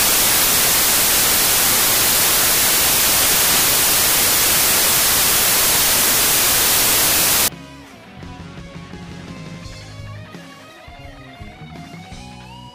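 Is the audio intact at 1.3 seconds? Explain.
No. At 1.3 seconds the audio is lost under loud, harsh broadband noise. The samples are built from the wrong bytes from 0.00 to 7.48 s. Each value is read with its bytes misaligned or swapped. The fast-changing low bits become the large part, so the sound is buried in harsh noise.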